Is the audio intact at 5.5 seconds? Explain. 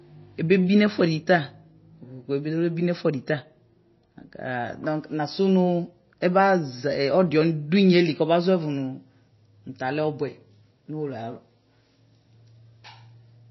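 No. MP3 compression runs through the whole clip, likely at a low bitrate near 24 kbps, so nothing survives above 5.8 kHz and dropped weak lines give this speech a watery, swirly smear.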